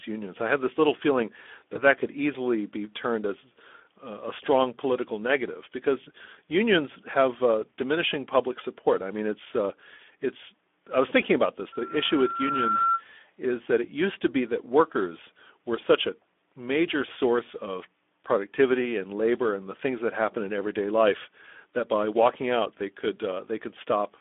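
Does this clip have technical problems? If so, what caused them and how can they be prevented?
Yes, there are three.

Speex codec: The whole clip is plainly coded, with a hoarse, noisy texture and a line band of about 250 Hz to 3.5 kHz. That sounds like low-rate Speex, something like 11 kbps, starving the excitation of bits. To prevent it, run a modern codec such as Opus at a higher bitrate.

VoIP packet loss concealed by the speech codec: From 1.73 to 1.81 s, right after "have this little feeling" and before "that could easily be", the sound smears into a brief stretch. It fits one lost 20 ms packet that the decoder papered over from its last pitch and filter, with the damage lingering into later frames. A wired link or a bigger jitter buffer with FEC would head this off.

Loudspeaker feedback squeal: Starting at 11.72 s, after "was thinking about this", a 1.4 kHz tone swells over about a second to roughly the speech's own level and cuts out at 13.03 s, before "is that it used". 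The mic was picking up its own loudspeaker, and the loop gain went above one at that frequency. Headphones, or lower monitor gain with a notch at 1.4 kHz, would stop it.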